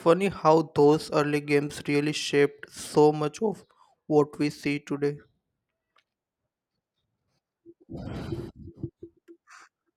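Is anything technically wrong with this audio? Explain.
No, nothing stood out as technically wrong when listening to this speech recording.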